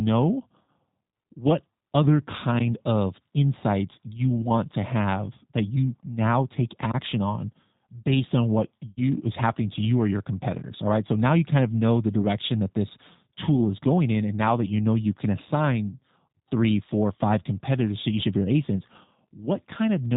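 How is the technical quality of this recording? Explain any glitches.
Quality is limited by low-bitrate speech coding throughout, with two brief dropouts. G.729 codec runs across the whole clip: speech rebuilt from a vocal-tract filter, pitch predictor and sparse pulses, consistent with an 8 kbit/s stream, sounds rough and synthetic, with nothing above 4 kHz. VoIP packet loss concealed by the speech codec occurs at 0.64 to 0.69 s (40 ms lost) and 8.89 to 9.01 s (80 ms lost), between "on based on what" and "is happening to you". The decoder stretches its last pitch and filter into a fading buzzy tone or coloured noise, and the voice stays weak briefly afterward.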